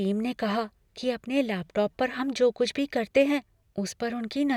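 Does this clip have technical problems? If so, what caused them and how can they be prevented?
No, this clip has no technical problems, so there is nothing to trace to a cause or prevent.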